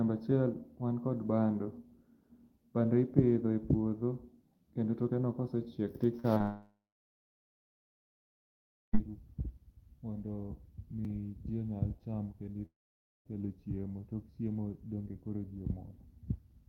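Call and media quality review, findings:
Burst of packet loss, 6.19 to 6.26 s: last sound held and decayed for about 45 ms, then audio resumes 40 ms later in the stream. Jitter buffer/PLC on the receive path. Unlike the short concealed losses that follow, the fill is long enough to hear as a fading buzz or hiss rather than a tick.

Short concealed packet loss, 6.34 to 6.38 s and 6.38 to 6.42 s: two back-to-back 20 ms holes, each bridged by roughly 20 ms of extrapolated signal before blending back. Receiver PLC. Heard as a brief smear or wobble, not a held tone. These are shorter than the burst, and the two together lead straight into the dropout.

Long network dropout, 6.42 to 9.00 s: about 2.5 s never played. Concealment decays quickly to silence for about 2.2 s, then audio returns further on. Likely cause: transport outage upstream of the jitter buffer. 12.66 to 13.27 s: same pattern, 0.6 s missing, about 0.55 s silent. 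The silence is what separates these from a burst, which has a fading fill with no dead stretch.

Audio missing between chunks, 11.05 s: a single skip with roughly 30 ms gone. The two sides are butted together with no fill and no silence. Likely cause: capture or processing working in 6 s chunks and dropping samples at the boundary. This differs from packet loss because nothing is concealed. It is a hard splice, possibly with a click.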